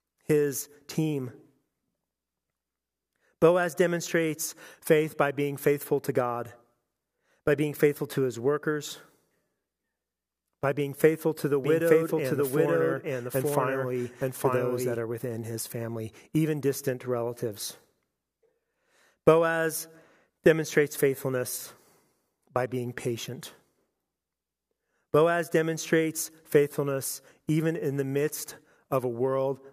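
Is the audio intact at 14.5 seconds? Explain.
No. From 11.64 to 14.96 s the speech is heard twice: a second copy, about as loud as the first, trails it by around a second and cuts in and out abruptly. This is a doubled audio track, likely from the same audio being captured again over a slower path.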